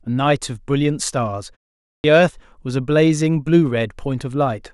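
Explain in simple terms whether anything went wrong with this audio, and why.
The output device seems to have dozed off during the half-second pause before 2.0 s and needed time to wake. That's a clipped start after a pause: the first 40 ms, from 2.0 to 2.04 s, are lost, so the speech jumps in abruptly, missing its opening sound.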